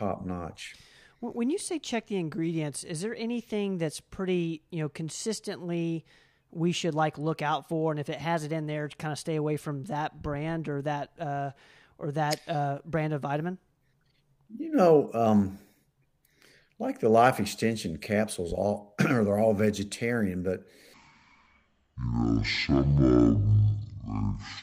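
Right after "they're all vegetarian but", at 20.94 s, the speech drops into a section at the wrong speed, running at 0.5 times through to the end at 24.62 s. Pitch falls about ten semitones with it, so everything goes deep and sluggish, likely from playback against a mismatched clock.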